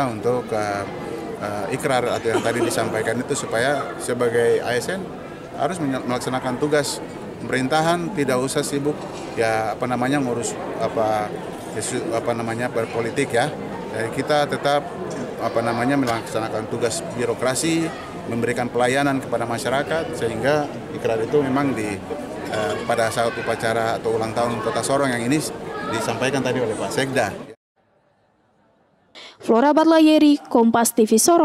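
No technical faults can be heard in this audio.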